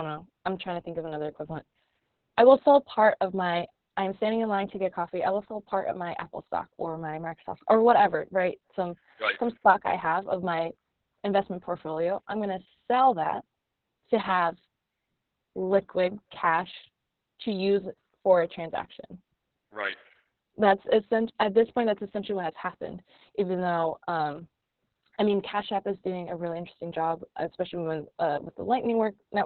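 Throughout the speech the sound is muffled, hoarse and faintly robotic, with nothing audible above about 4 kHz. That is heavy Opus voice compression in SILK mode. It narrows to narrowband and codes the excitation coarsely, consistent with a bitrate near 6 kbps and long 60 ms frames.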